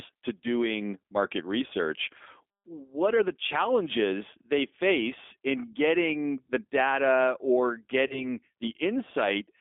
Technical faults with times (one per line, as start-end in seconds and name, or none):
0.00-9.61 G.729 codec
8.07-8.26 VoIP packet loss concealed by the speech codec